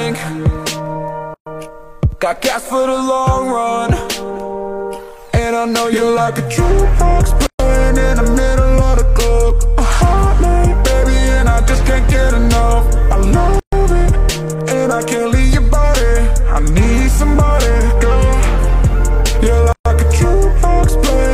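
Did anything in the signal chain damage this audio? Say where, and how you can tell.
Yes: gaps of about 130 ms at 1.34, 7.47, 13.60 and 19.73 s, six seconds apart, are codec-stage gaps at joins of encoded pieces, where untrimmed encoder delay and padding remain.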